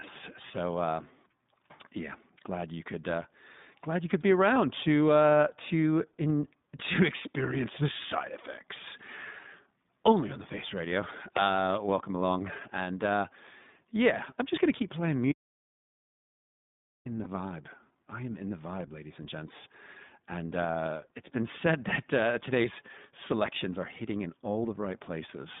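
iLBC codec, throughout the 26 s of speech: the line is band-limited to roughly 150 Hz to 3.7 kHz, so the speech loses its low body and all its upper brightness. Each short frame's excitation is coded on its own, and the result is plainly rough and slightly synthetic. The texture fits iLBC's 15.2 kbit/s mode with 20 ms frames.

Lost iLBC frames at 4.54 s and 11.44 s: each is a single missing frame of about 20 ms. The decoder fills the hole by repeating the last pitch cycle blended with noise, which produces a brief held, faintly buzzy smear in place of the real sound. Because the next frame decodes independently, the speech snaps back to normal almost immediately afterwards.

Audio dropout to silence from 15.32 s to 17.06 s: the sound cuts off abruptly mid-flow, and for about 1.7 s there is silence with no room tone at all before it resumes just as suddenly. Whatever was said in that stretch is simply missing. 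The likely cause is that the input signal was lost, through a link failure, a disconnected device or a mute, while the recording kept writing silence.

Lost iLBC frame at 17.24 s: shortly after the speech returns, another single 20 ms frame is concealed the same way, as a short buzzy hold before the speech recovers at once.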